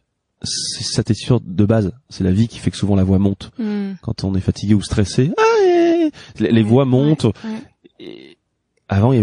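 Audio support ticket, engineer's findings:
MP3 compression, throughout. Watery, swirly coding damage across the whole speech clip, treble cut off, weak spectral detail flickering frame to frame, s sounds chirpy and metallic. Likely cause: a heavily starved MP3 encode, damage level consistent with roughly 40 kbps; too few bits forces the encoder to drop the top band and zero quiet lines.

Pre-echo, 4.53 to 4.56 s, between "on est" and "ou stressé". Short hiss about 22 ms ahead of the attack, noise up about 15 dB, onset smeared. Transform-block noise spread over a window of about 52 ms; no switch to short blocks, so the loud attack's quantisation noise leaks into the quiet gap before it.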